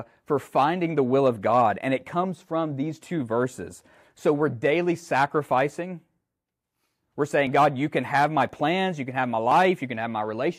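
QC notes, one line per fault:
7.47–10.53 s, periodic USB or driver dropouts: something on the host appears to stall the USB link or audio driver about every 1.02 s, and each time a few milliseconds of speech, roughly 4 ms, are skipped outright rather than replaced with silence. The waveform jumps across each gap, so the speech carries a small click or tick at each one, about four in all, evenly spaced and heard only where there is signal.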